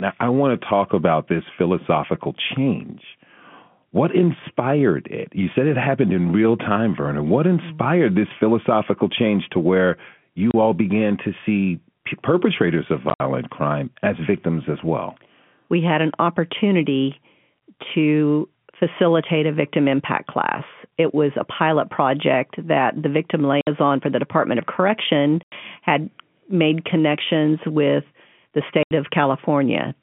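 Packet loss filled with silence cuts the speech five times: a 30 ms hole at 10.51 s, 80 ms missing in scattered gaps across 13.1 to 13.2 s (longest run 60 ms), then 60 ms at 23.61 s, 90 ms at 25.43 s and 80 ms at 28.83 s. The gap lengths come in 10 ms steps, which fits 10 ms packets. Each hole is dead silence, not the repeated or smeared sound that concealment would leave. The telephone-band G.711 line around the holes stays narrow at 150 Hz to 3.4 kHz.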